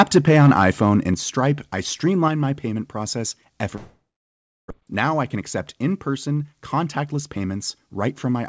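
At 1.14 s and again at 2.28 s the level drops in a single step, by about 5 dB and then about 4 dB. That's most likely a microphone volume stepped down by the call software's automatic gain control, which decided the input was running too hot and cut it abruptly.

From 3.76 to 4.72 s there's a long network dropout, likely a stretch where packets simply never arrived. The receiver stretches the last bit of sound into a fading buzz, then it's near silence for roughly 0.7 s. When audio returns, about 0.6 s of material is gone.

Right after that, from 4.79 to 8.40 s, a jitter buffer speed-up kicks in. The buffer had built up around a third of a second of extra delay, so it keeps trimming tiny pitch-period slices. The result is sound running at about 109% speed with the pitch unchanged, so it feels a little rushed. Throughout, the G.722 call path leaves nothing above 8 kHz.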